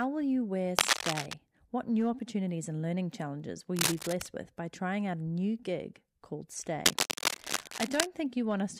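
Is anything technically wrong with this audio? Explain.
Yes. Cable scratch noise at 0.77–1.34 s (after "will you wear"), 3.76–4.29 s (between "and learning challenges will" and "with by trying out") and 6.85–8.07 s (after "new gig called"). It is likely caused by a worn cable or connector being moved, with its changing contact resistance adding dense, uneven bursts of scratching over the speech. The first burst is about 5 dB louder than the speech, and the other two are roughly as loud as it.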